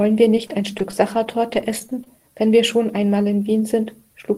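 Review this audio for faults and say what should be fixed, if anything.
Scattered short gaps from 0.35 to 2.07 s: about ten lost or late packets, each patched by extending the preceding sound, leave brief ticks and smears in the speech. Adding forward error correction or a larger jitter buffer would prevent these holes.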